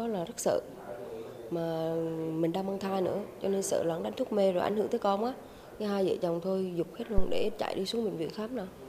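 Phantom power was switched on or off on a live input at 7.18 s, and the voltage step passed through the coupling capacitors. The result is a phantom power thump in the audio: a deep thud peaking at about -13 dBFS, decaying within roughly 107 ms and gone by 7.66 s.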